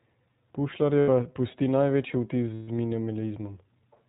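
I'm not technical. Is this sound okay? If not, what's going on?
No. The whole clip runs through the iLBC codec, an internet-calling format that sends the speech in small 20 ms chunks and discards everything above 4 kHz. That is why it sounds muffled, slightly rough and synthetic throughout. A plain phone line would be dull but not robotic like this.

There are also lost iLBC frames in two places: from 1.0 to 1.1 s, just before "pusti največji vtis", and from 2.54 to 2.68 s, right after it. Parts of the signal never arrived, for about 80 ms and then 140 ms. Instead of falling silent, the player stretched the last sound into a brief buzzy, breathy hum. That hum is what sets it apart from a simple dropout, and the speech comes back almost immediately afterwards.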